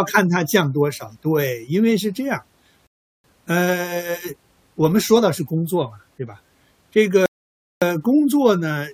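Speech that halts twice for a rebuffering stall, from 2.87 to 3.24 s (0.37 s of added silence) and from 7.26 to 7.82 s (0.56 s). Playback ran out of downloaded audio and waited for more. Unlike a packet dropout, which cuts out part of the signal, each stall picks up exactly where it stopped. Nothing is missing, and the clip simply runs longer by the length of each gap.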